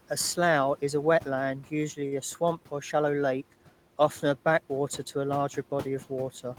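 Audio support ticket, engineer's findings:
Noise suppressor artifacts, whole clip. Background sinks between phrases and rises under speech. Suppressor attenuating bands judged steady noise, frame by frame, by about 12 dB. Room noise underneath, about 19 dB below speech.

Short stall from a late packet, 2.07 to 2.14 s, after "wetland usually", before "a swamp or shallow". Sound held about 43 ms. Jitter buffer ran dry and the receiver stretched the last sound. Nothing lost, and delay grew 43 ms.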